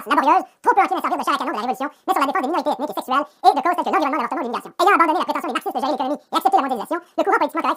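Audio read two samples at a time (double speed), throughout: each pair of samples is taken as one frame, so the sound runs at twice speed and a full octave higher.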